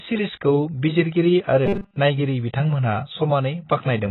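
Dull, muffled speech runs through the whole recording, with a smeared, fizzy edge on sibilants. This is likely heavy AAC compression: AAC-LC discarding high frequencies and coarsely quantising the rest, at a rate that points to roughly 16 kbps.

From 1.66 to 1.97 s, after "सिरिजखौ बिजिरगिरि आरो" and before "नायगिरि बिथांमोनहा", the voice turns into a rigid metallic buzz at 200 Hz, the robotic sound from repeated short buffers. Audio likely arrived too seldom, so a segment of about 5 ms was looped while most of the real signal was skipped.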